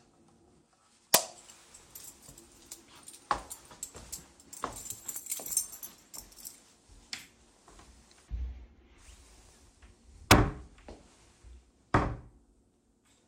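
A violent crack bursts out at 1.14 s, and a second at 10.31 s, each far harsher than ordinary clipping. Both are integer overflow. On these loud peaks the signal was driven about 8 dB and about 5 dB past the largest value the integer format can hold, and instead of being limited it wrapped around to the opposite sign, slamming the waveform across its full range.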